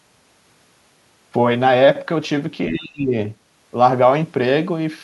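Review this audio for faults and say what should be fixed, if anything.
There's one thing to fix: speech suppressed in double talk, from 2.68 to 3.14 s. The speech drops by around 30 dB for roughly half a second, then comes back. The likely cause is the far end talking at the same moment. The echo canceller couldn't tell this talker from its own loudspeaker echo, so it pulled everything down. To prevent it, tune the canceller's double-talk detection so near-end speech stays open while the far side is active.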